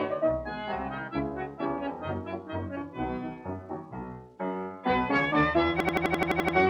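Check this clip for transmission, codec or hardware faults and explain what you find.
One fault appears near the end. From 5.80 to 6.57 s there is a system hang loop. The system froze while the hardware kept replaying one ring buffer. An 85 ms piece repeats nine times at 11.7 Hz, which fits a 4096-sample buffer. It sounds like a rapid machine-gun stutter.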